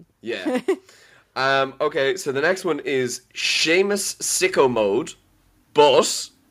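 From 1.34 s to 5.06 s, automatic gain rising lifts the level by about 6 dB as the gain control responds to a quiet input. Voice and background noise swell together over several seconds, which distinguishes it from a speaker moving closer, where the noise floor would stay put.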